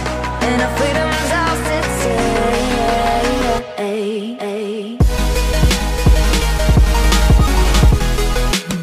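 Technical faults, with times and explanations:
4.39 to 7.97 s, doubled audio track: a second full-band copy of the sound runs roughly 0.7 s behind, at about the same level as the original, with no decay or room colour. It is likely an edit or a slower capture path mixing in a duplicate, which is why the copy starts and stops abruptly.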